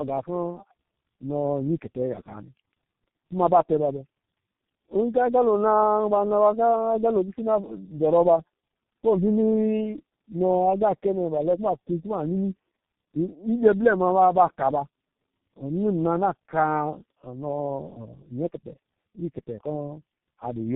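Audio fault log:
Throughout, tandem speech coding: the speech sounds rough, muffled and warbly, with nothing above about 3.8 kHz. The roughness and warble point to three low-rate speech coders in a row, with G.711 links between them, which fits a G.729A stage followed by two passes of G.723.1 at 6.3 kbit/s. Each coder rebuilds speech from the previous one's already-degraded output, so its errors stack on top of the last coder's errors.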